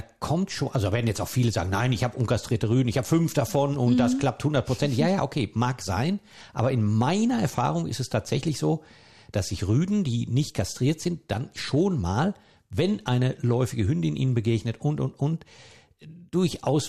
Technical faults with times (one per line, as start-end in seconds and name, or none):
none